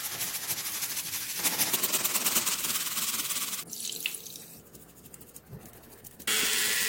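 The audio plays at its normal rate for the first 1.70 s. From there to the end it runs as a section at the wrong speed. Everything moves 1.31 times faster than it should. Pitch rises with it, by about five semitones, so the sound turns high and hurried at once. Speed and pitch shift together at the same instant. That points to a wrong playback or resampling clock. This is likely a rate mismatch in editing or playback.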